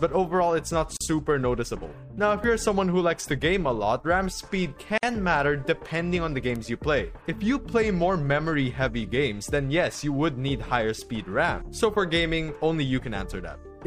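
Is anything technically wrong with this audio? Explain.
Yes, two kinds of fault are audible. At 0.97 to 1.01 s and 4.98 to 5.03 s there is a gap at a join of encoded pieces. The audio was encoded in separate sections and spliced without trimming the encoder's start delay and end padding. The sound drops out for about 38 ms and then 51 ms, with smeared edges, and resumes where it stopped. At 2.44 s and 6.56 s there is a bit error spike. A single flipped bit throws one sample to a far-off value before it snaps back, producing an isolated, broadband tick that bears no relation to the surrounding sound.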